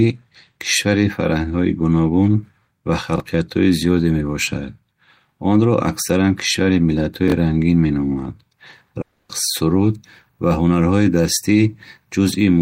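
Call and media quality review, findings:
Chunks out of order, 3.16–3.20 s: brief jumbled stutter. Jitter buffer or playout reordering; one 20 ms chunk played one slot late, swapped with its neighbour. Nothing lost, but three hard joins.

Chunks out of order, 7.28–7.32 s: same symptom and mechanism, one 20 ms chunk one slot late, three hard joins. A 20 ms unit fits standard packetisation, so this points to the receive-side ordering stage.

Long network dropout, 9.01–9.31 s: about 280 ms of buzzy, fading fill replaces the missing audio, with no full silence. The audio resumes afterwards with that stretch gone. Likely a network gap, so the receiver extrapolates the last sound.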